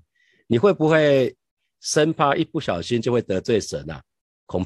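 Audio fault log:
No faults heard in this speech recording.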